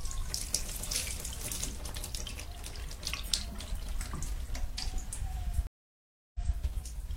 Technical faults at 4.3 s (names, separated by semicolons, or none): none